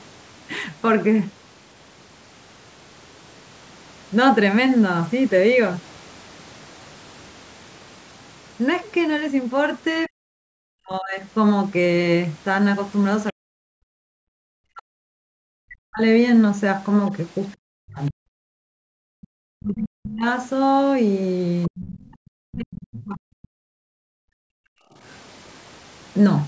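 From 10.07 to 11.23 s the speech sinks by as much as about 40 dB, dulling and breaking up for roughly a second. That's speech suppressed in double talk, and the likely cause is the echo canceller hearing both ends at once and clamping everything. The same thing returns from 13.31 to 16.02 s and from 17.58 to 20.26 s, each time costing around two seconds of the talker as words thin out and chop.

Inside that last stretch, from 18.48 to 18.69 s, the room tone itself drops out, down about 40 dB. That's background gated by the echo canceller: it saw loudspeaker playback and shut the mic hard for a fifth of a second before releasing.

At 21.63 to 21.68 s a tiny scrap of a second voice slips in, roughly 25 dB under the speech, and most likely it's the other side's voice leaking through from the loudspeaker. Immediately after, from 21.69 to 23.24 s, the talker is pushed down again by about 40 dB for around a second and a half, another likely case of double-talk suppression. 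A second faint blip of the far voice, roughly 30 dB down, pokes through at 23.43 to 23.48 s, again likely leakage.

Then from 23.52 to 25.0 s the background gates out once more, down about 40 dB for roughly one and a half seconds before the room sound comes back. Through all of it the call's mic processing runs as usual, with nothing above 8 kHz.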